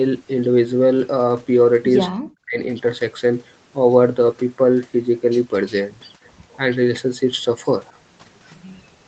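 Speech suppressed in double talk, from 2.18 to 2.59 s: the speech drops away sharply, by about 40 dB at its deepest, for roughly 0.4 s. The likely cause is an echo canceller that could not tell the near talker from the far side and turned both down.

Echo leak, from 7.86 to 7.93 s: a brief, faint copy of the speech returns 256 ms late, about 30 dB below the direct sound. A loudspeaker's echo likely slipped past the far end's echo canceller and was sent back down the line.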